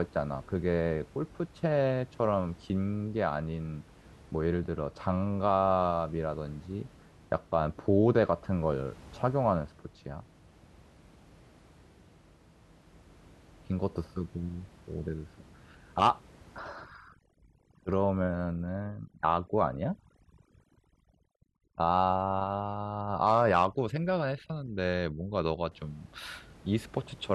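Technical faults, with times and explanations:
16.59–25.72 s, overdone noise removal: a noise reduction stage set far too strong switches individual frequency bands down or off whenever they sit near its noise estimate. The room noise, about 26 dB below the speech before this point, drops and breaks up into twinkling specks, and quieter speech components vanish with it. A spectrogram shows scattered isolated dots in the gaps and ragged, holed harmonics; the waveform's floor drops.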